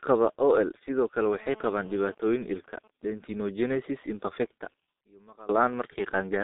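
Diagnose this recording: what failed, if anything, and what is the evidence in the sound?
Codec stage: the whole clip shows heavy G.723.1 codec damage. Nothing is present above about 3.8 kHz, and the band is limited to roughly 200 Hz to 3.7 kHz. Speech is muffled and hoarse with smeared consonants, which fits a coder near 6.3 kbit/s using 30 ms frames.

A sudden gain jump runs from 5.01 to 5.49 s. Speech and background noise drop together by about 24 dB in a single step, then return just as abruptly. The likely cause is a digital gain change applied in call processing without a ramp.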